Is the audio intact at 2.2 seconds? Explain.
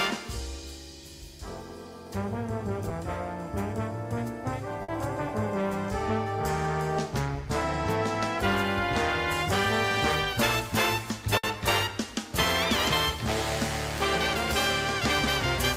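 Yes, the audio is intact at 2.2 seconds, with no dropout, click, distortion or other fault at that point.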